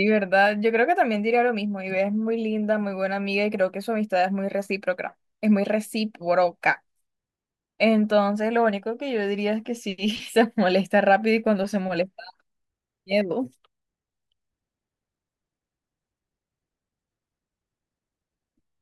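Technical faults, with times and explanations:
Nothing in the speech recording stood out as a technical problem on listening.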